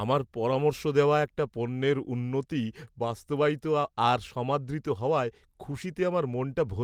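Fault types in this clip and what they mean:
Lost packet rebuilt from error correction: near 5.71 s one 20 ms packet went missing, and the decoder played the low-bitrate copy carried in the next packet instead. There's no gap, just a brief rougher, noisier patch in the speech.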